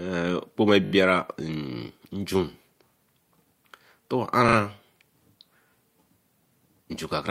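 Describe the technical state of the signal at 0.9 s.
At 0.9 s the speech hits a run of repeated frames, from 0.84 to 0.92 s. A short stretch of compressed audio, about 40 ms long and consistent with a pair of 20 ms frames, was delivered and decoded four extra times. The decoder replays that same fragment back to back, so the speech stutters. The passage runs about 80 ms longer than it should.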